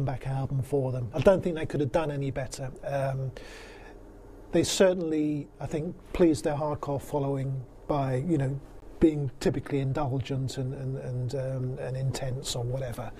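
Bluetooth stall at 8.80 to 8.82 s: a 20 ms gap of silence, likely from delayed wireless packets letting the headphones' buffer run dry before playback resumed.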